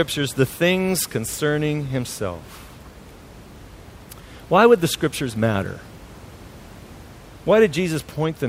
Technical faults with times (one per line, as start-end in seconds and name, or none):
none